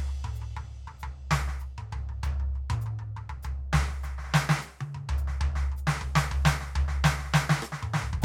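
No technical faults can be heard in this music clip. There are no events to place in time.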